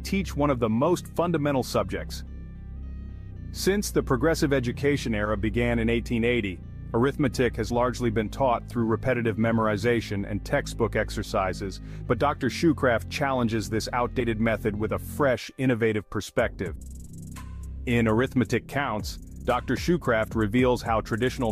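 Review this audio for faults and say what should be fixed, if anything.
Brief smeared blips at 7.69 s, 14.19 s and 16.74 to 16.76 s, each jumping the sound ahead by about 20 ms, 50 ms and 100 ms, are compressed frames skipped. The skips fit one, two and roughly five missing 23.2 ms frames. Overlapping frames blur each join. Verifying file integrity and re-encoding from an intact source prevents this.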